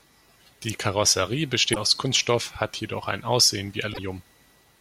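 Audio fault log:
1.72–1.77 s and 3.90–3.99 s, damaged data in a compressed stream: two brief glitches, about 50 ms and 90 ms long, cut across the speech. Corrupted bytes left the decoder misreading frames, losing sync and hunting for the next valid frame header.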